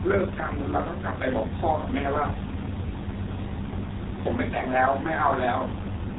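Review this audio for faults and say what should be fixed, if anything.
G.723.1 codec damage runs through the whole speech clip and is heavy. Nothing reaches above about 3.9 kHz, so the speech sounds muffled. The codec models the voice in 30 ms frames and updates that model slowly, which blurs consonants and leaves a hoarse texture. The thin, coarse quality fits a stream of roughly 6 kbit/s. To prevent it, capture or transmit with a wideband codec at a higher bitrate instead of legacy G.723.1.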